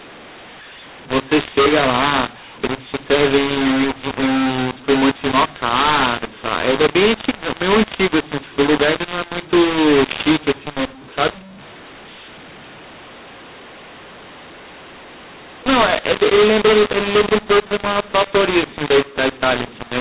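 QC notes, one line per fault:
throughout, mu-law and A-law mixed up: the telephone audio was coded as A-law but decoded as mu-law, so sample levels come out scrambled. Some are too loud, others too soft, and the quietest sit well above silence, giving harsh, distorted speech and noisy pauses within a band topping out around 4 kHz.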